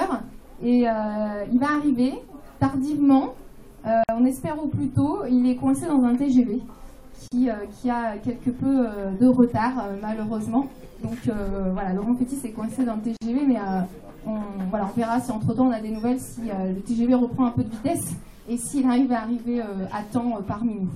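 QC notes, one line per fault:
4.04–4.09 s, 7.28–7.32 s, 13.17–13.21 s: gap at a join of encoded pieces. The audio was encoded in separate pieces and spliced without trimming, so each piece's encoder start-up delay and final-frame padding stayed in as silence. The result is three dropouts of 53 ms, 37 ms and 47 ms in continuous sound, with edges smeared by the codec. Each time, the sound picks up exactly where it stopped.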